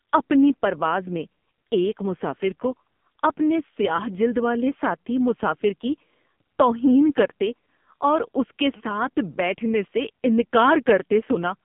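The speech passes through an AMR narrowband mobile codec for its whole length, heavily compressed in a way that points to a low mode around 5.9 kbps. Everything above 3.7 kHz is gone, the band sits near 150 Hz to 3.6 kHz, and the voice turns buzzy and synthetic.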